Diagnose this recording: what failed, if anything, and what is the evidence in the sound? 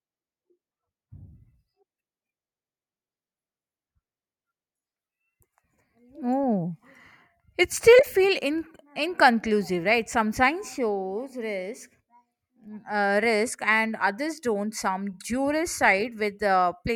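Nothing in the signal chain fails audibly here, as the speech carries through with no dropouts, clicks, distortion, level jumps or other technical disturbances at any point.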